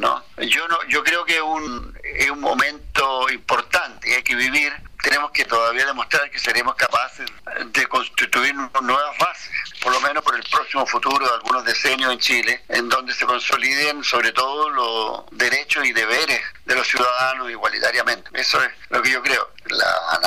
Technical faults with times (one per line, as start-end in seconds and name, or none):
4.22 audio missing between chunks
10.20 audio missing between chunks
16.17 audio missing between chunks